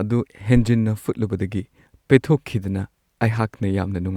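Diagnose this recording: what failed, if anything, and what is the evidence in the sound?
A phantom power thump sits in the analogue input stage, at 0.56 to 0.63 s in this speech recording: a deep thud peaking at about -12 dBFS. A supply was switched on or off on a live input, and that voltage step passed through the coupling capacitors. The waveform shows a single large low-frequency excursion dying away with a 16 ms decay, and the spectrogram shows a brief dark band hugging the bottom few hundred hertz.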